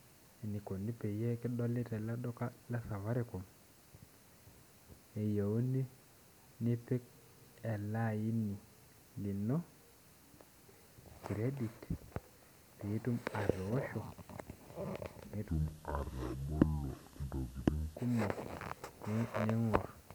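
From 15.49 to 17.97 s the speech drops into a section at the wrong speed, running at 0.671 times normal rate. Pitch and tempo fall together, about seven semitones lower, slow and heavy, likely from playback against a mismatched clock.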